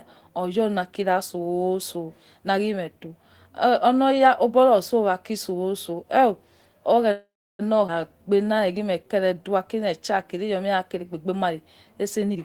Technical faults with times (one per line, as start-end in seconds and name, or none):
7.11-7.61 call audio freeze
7.87-7.90 skip ahead
8.13-10.01 jitter buffer slow-down
12.30-12.39 jitter buffer speed-up